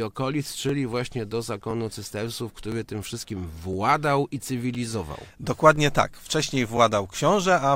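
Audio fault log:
0.69 s and 2.72 s: overlapping chunks. Each 1-second chunk began 13 ms before the previous one ended, so that slice repeats, heard as a brief click or stutter.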